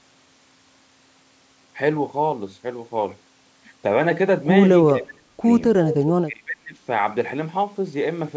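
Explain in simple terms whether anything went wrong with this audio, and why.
Two things go wrong in this call recording. From 4.89 to 5.45 s, and again from 6.25 to 6.78 s, the voice sinks and partly cuts out, about half a second each time. That's speech suppressed in double talk, likely because both sides spoke at once and the echo canceller turned everything down.

Between those two dips, from 5.87 to 6.05 s, you can hear a faint second copy of the voice trailing about 0.36 s behind. That's an echo leak, likely from a loudspeaker on one end whose echo canceller let some of the sound slip back into the call.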